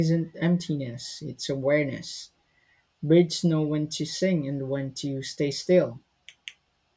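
No technical faults can be heard anywhere in this speech recording; the signal stays intact and continuous throughout.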